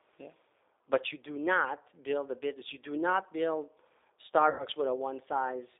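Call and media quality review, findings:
Rough, slightly synthetic speech throughout, band-limited to roughly 300 Hz to 3.7 kHz with no top end. G.729 codec: the low-rate model (vocal tract filter, pitch predictor, sparse pulses) rebuilds speech approximately; the audio is consistent with 8 kbit/s.

4.50–4.65 s: speech smears into a buzzy tone or coloured noise that fades, weak for a moment after. VoIP packet loss concealed by the speech codec: about 90 ms missing, fitting three lost packets; the decoder extrapolated its last pitch and filter with decaying gain.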